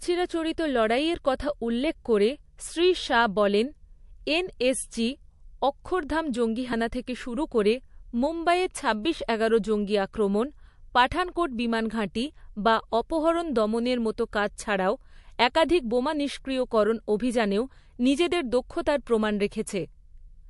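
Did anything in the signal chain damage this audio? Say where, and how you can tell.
Yes, at the codec stage, likely MP3 compression throughout: nothing above 11.3 kHz on a spectrogram, with plainly audible watery, flickering detail as weak frequency lines drop in and out.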